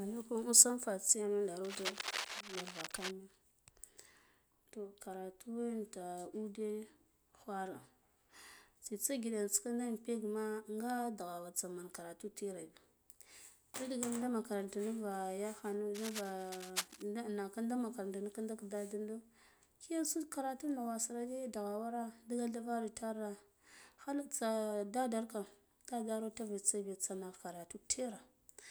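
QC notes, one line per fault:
1.64–3.11 s and 15.94–17.02 s, cable scratch noise: two bursts of dense, uneven scratching and rustling sit over the speech, only a few decibels below it, lasting about 1.5 s and 1.1 s. This is likely a worn cable or connector being moved, so its contact resistance jumps rapidly. Unlike vinyl-style crackle or isolated clicks, the noise comes in clustered, irregular runs tied to a moment of handling, then stops.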